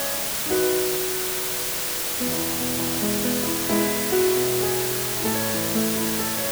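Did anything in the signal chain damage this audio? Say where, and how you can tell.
Yes. The damage happens at a sample-format conversion stage. The whole clip, start to finish, sits under a constant, even hiss that's roughly as loud as the sound itself, yet there's no gritty distortion riding on the signal. That's low bit depth with dither. The audio was requantised to just 3 bits with dither added before rounding, so the coarse rounding error gets spread out into steady white noise instead of harmonic crunch.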